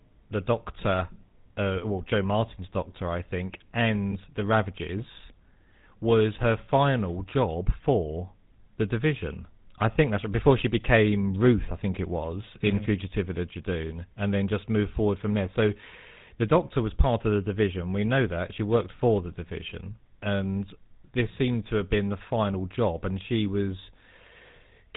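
From start to finish the speech carries the signature of the GSM full-rate codec, and the damage is plainly audible. The codec reduces the voice to a vocal-tract filter excited by a sparse, regularly spaced pulse train, so the harmonics take on a buzzy, gravelly grain rather than a smooth tone. Nothing survives above 4 kHz, which leaves consonants dull and narrow. The overall character fits a 13 kbit/s mobile-phone link.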